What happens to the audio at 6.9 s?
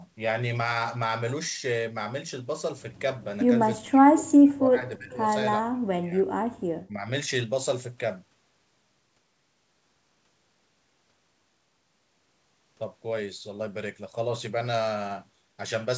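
From 6.87 to 7.10 s the speech dips by around 10 dB for roughly a fifth of a second, then returns to its normal level. This is likely speech suppressed in double talk: with both ends talking at once, the echo canceller could not tell the near talker from the loudspeaker echo and attenuated everything it heard, so the local speech was pulled down along with the echo it was meant to remove.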